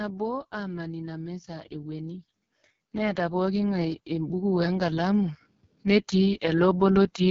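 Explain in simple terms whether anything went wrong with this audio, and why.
A couple of things went wrong here. First, the whole clip has been squeezed through the AMR wideband (HD Voice) codec, the kind used for phone calls, at its very lowest quality setting. At that setting the codec rebuilds speech from a rough model of the mouth and throat, so the voice comes out raspy and gritty, and nothing is left above about 7 kHz. That gives it the heavily crunchy sound of a weak mobile call.

Second, the volume keeps creeping up by itself. That's automatic gain rising: the automatic level control decided the input was too quiet and slowly turned it up. It happens twice, once gently from about 0.5 to 2.27 s and then more strongly from 2.96 to 7.18 s. Because it raises everything at once, the background swells right along with the speech, which is the giveaway that it's the gain control and not the speaker getting louder.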